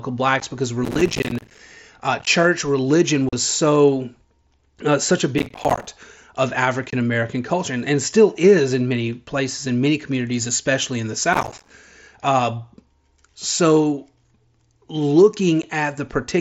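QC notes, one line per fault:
0.40 s, 2.19 to 2.27 s, 3.29 to 3.33 s, 6.90 to 6.93 s, 15.62 s: unconcealed Bluetooth headset packet loss. Short holes with hard edges: 15 ms at 0.40 and 15.62, 37.5 ms at 3.29, 22.5 ms at 6.90. The 2.19 event scatters 37.5 ms of gaps over 75 ms, longest 15 ms, so it sounds chopped. The lengths fit whole 7.5 ms headset frames dropped between headset and phone, with nothing patched in to cover them.
0.84 to 1.59 s, 5.38 to 5.87 s (right after "uh such a"), 11.33 to 11.70 s (right after "communities especially in the"): processor overload crackle. Gritty tearing rides on the sound, then stops cleanly. Each burst is dozens of tiny silent gaps in quick succession, which fits buffers of around 5 ms missing their deadlines one after another while the processor was overloaded. Every gap is left as silence with hard edges, and the clicks pile up into continuous crackle.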